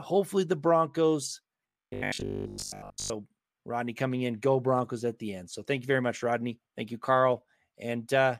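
From 1.68 to 3.1 s the speech becomes a rigid 50 Hz buzz, robotic sound likely from repeated short buffers of about 20 ms replacing most of the audio.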